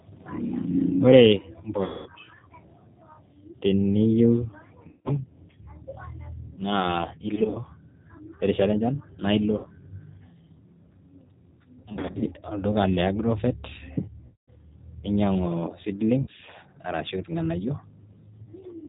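Throughout, the speech sounds rough, slightly synthetic and dull, with nothing above 4 kHz: plainly audible G.729 codec damage from 8 kbit/s model-based coding. At 1.84–2.10, 4.89–5.14, 7.35–7.61, 9.58–9.68, 11.89–12.26, 14.26–14.49, 16.21–16.29 and 18.45–18.49 s, the sound smears into a fading buzz or coloured noise and stays weak afterwards. This is VoIP packet loss concealed by the speech codec, with the decoder extrapolating over gaps of up to 220 ms.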